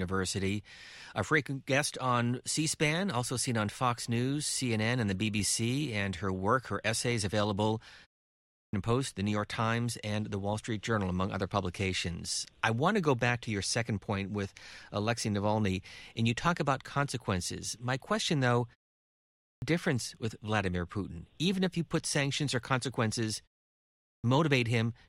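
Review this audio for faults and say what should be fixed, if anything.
The output device sleeps during pauses and wakes late, producing clipped starts after pauses: about 0.4 s is swallowed after "work her essays available" (8.34 s), "question though" (19.18 s) and "put sanctions or consequences" (23.83 s). To fix it, keep the output stream active through pauses, or pre-roll it before sound resumes.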